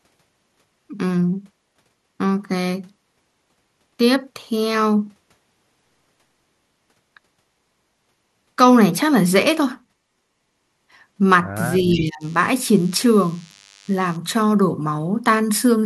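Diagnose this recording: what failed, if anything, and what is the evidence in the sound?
Analogue wiring: a steady thin buzz with dense harmonics from 11.63 to 14.16 s, at 100 Hz and about 30 dB below the speech. That is DECT cordless phone buzz, where 10 ms radio bursts are rectified into the audio path.

Call processing: from 11.91 to 12.05 s a faint, delayed copy of the speech trails about 309 ms behind, roughly 15 dB down. This is an echo leak, likely from a far-end echo canceller letting loudspeaker pickup through.

Call processing: from 11.94 to 12.24 s the speech dips by up to about 20 dB, overlapping the echo. This is speech suppressed in double talk, likely the canceller attenuating everything when both directions were active.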